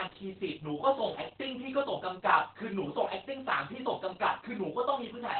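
From start to finish, the speech carries Opus voice compression. Nothing is heard above about 4.4 kHz, so it sounds muffled and narrowband. The linear-prediction coder renders the excitation coarsely, adding a hoarse, slightly robotic edge. Such heavy damage fits roughly 8 kbps.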